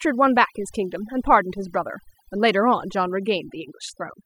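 From start to end, the speech carries overdone noise removal. The noise reduction was set too aggressively, so individual frequency bands that sit close to its noise estimate are pulled far down or switched off entirely, taking the quieter components of the voice with them. The background collapses to near silence dotted with twinkling specks, and the voice loses its softer detail, stripped away along with the noise.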